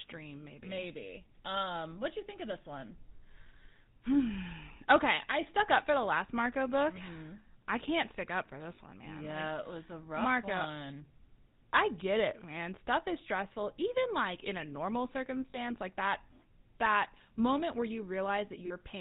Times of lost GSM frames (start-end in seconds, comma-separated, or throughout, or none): 3.42-3.47, 8.76-8.78, 15.50-15.56, 18.66-18.72